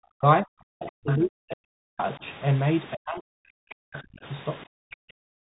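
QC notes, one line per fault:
Throughout: Bluetooth CVSD headset codec. Nothing passes above 3.8 kHz, s sounds are scratchy and a granular hiss sits under the speech, consistent with 64 kbps CVSD.
0.00–0.26 s, 0.42–2.23 s, 2.93–4.25 s, 4.65–5.46 s: speech suppressed in double talk. The speech dips by roughly 40 dB or breaks into pieces, likely the echo canceller ducking during simultaneous talk.
1.09–1.16 s: other side's voice leaking through. A brief scrap of a second voice, roughly 15 dB below the speech, is likely residual loudspeaker echo the canceller missed.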